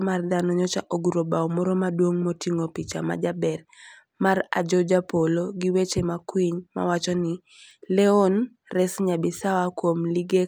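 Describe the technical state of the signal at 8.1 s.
At 8.1 s the speech signal is intact, with no audible technical fault at that moment.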